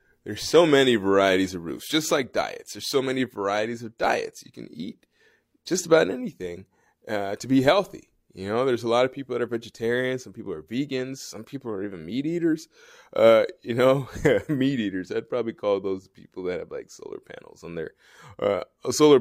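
Adaptive stream starting at a low bitrate, from 0.0 to 6.0 s: the player opened on a cheap rendition to start fast, so the treble sounds synthetic and codec artefacts are stronger, which fits HE-AAC near 32 kbit/s. At 6.0 s quality jumps, with no gap, to what sounds like AAC-LC around 96 kbit/s.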